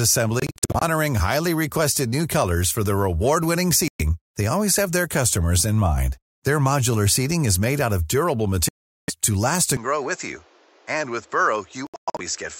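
Bluetooth dropouts at 0.40 to 0.82 s, 3.88 to 4.02 s and 8.69 to 9.10 s cut the speech into silent holes, likely packets arriving too late and being discarded. The first scatters about 232 ms of gaps across 418 ms, none longer than 46 ms; the others lose 116 ms and 395 ms. Each time, the speech resumes as though it had kept running.

An input switch to a poorer device at 9.77 s, likely a move to another microphone or a headset call profile, makes the sound duller, with nothing above 7.8 kHz. The level drops by a few decibels, a faint new background noise appears, and there is no gap at the changeover.

A final Bluetooth dropout, from 11.87 to 12.21 s, loses about 255 ms in gaps spread over 325 ms, the longest 116 ms.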